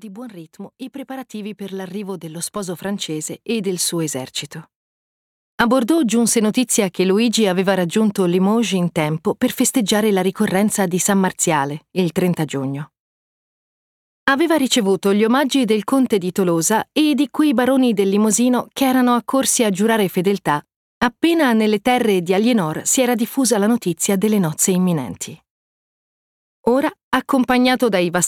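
Sample clock jitter runs throughout: an unsteady converter clock, wobbling around a microsecond, mistimes samples, adding roughness about 35 dB down that swells on loud, bright passages.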